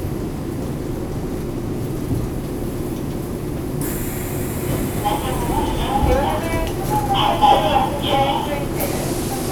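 No technical faults are audible.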